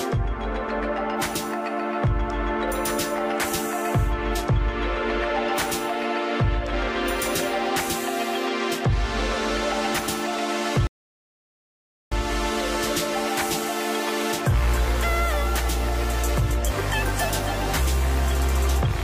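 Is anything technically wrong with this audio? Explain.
Yes. At 10.87 s the sound drops abruptly into silence and stays silent until 12.12 s, then picks up exactly where it left off. This is a rebuffering stall: playback exhausted its downloaded audio and waited for more, adding about 1.25 s without skipping anything.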